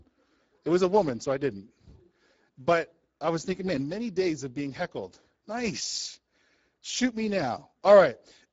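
Speex codec damage runs the whole way through: the starved CELP excitation leaves the speech hoarse and grainy, pointing to roughly 10 kbps, with nothing above 7.7 kHz.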